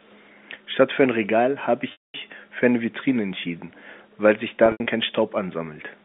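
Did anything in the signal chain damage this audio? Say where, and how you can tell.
Yes, packet loss with pitch repetition in the network stage, at 1.92–2.14 s (220 ms lost) and 4.66–4.86 s (120 ms scattered, longest 80 ms run). The receiver looped the last pitch period, giving a held buzz that fades before speech returns.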